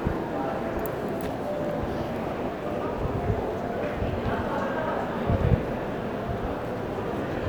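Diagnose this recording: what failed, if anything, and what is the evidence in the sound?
Nothing in the signal chain appears to have failed: the sounds in the recording hold continuity, with no dropouts, discontinuities or added noise anywhere in the audio.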